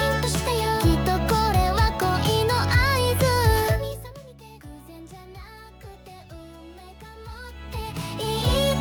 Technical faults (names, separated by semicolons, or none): zipper noise